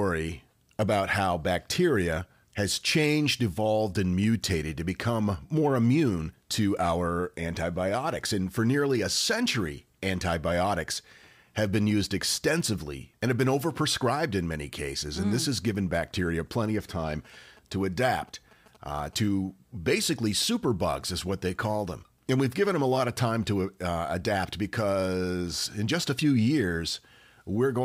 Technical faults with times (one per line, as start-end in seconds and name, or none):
17.10-19.15 GSM signalling bursts